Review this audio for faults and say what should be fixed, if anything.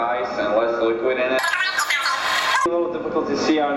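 From 1.39 to 2.66 s there is a wrong sample rate fault. Samples that fit a 16 kHz recording are played out at 48 kHz without conversion, so the sound runs three times too fast and 19 semitones too high. To prevent it, check the source rate and resample to the output rate whenever they differ.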